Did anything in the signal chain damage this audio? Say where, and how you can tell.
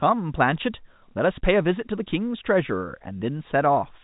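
No, nothing damaged it.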